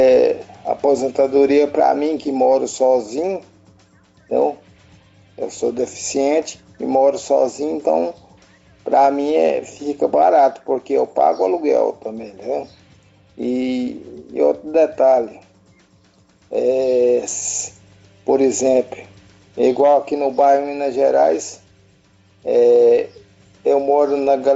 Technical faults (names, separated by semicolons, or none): gain pumping